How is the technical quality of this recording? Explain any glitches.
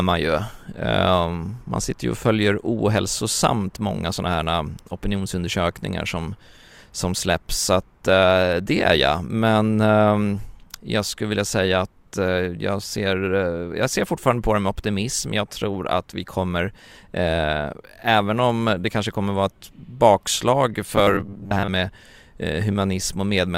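One clear fault affects the speech, near the end of the recording. From 20.96 to 21.7 s there is robotic sound from repeated short buffers. The likely cause is new audio arriving too slowly, so the playback side keeps repeating a short chunk, around 10 ms, while about half of the real audio is skipped. That repetition imposes a fixed 100 Hz buzz, making the speech metallic and mechanical while still loosely tracking its shape.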